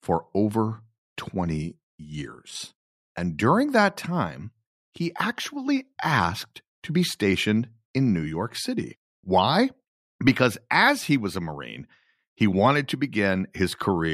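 No technical faults are audible.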